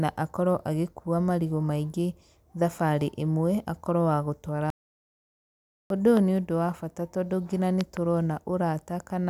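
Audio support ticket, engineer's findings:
Audio dropout to silence: speech cuts off abruptly at 4.70 s. Dead silence with no room tone until 5.90 s, so 1.2 s of speech lost. Likely input device disconnect or link failure upstream, with recorder/encoder writing silence through the gap.

Loud pop, 6.17–6.19 s: single sharp pop, about 10 dB above speech, speech continuing underneath. Likely voltage transient from connector, switch or static, shaped by downstream circuitry.

Loud pop, 7.81–7.99 s: double pop right after "nginya nĩ", peaking about 15 dB over speech. Two transients in quick succession, likely plug or driver glitch. Speech carries on beneath.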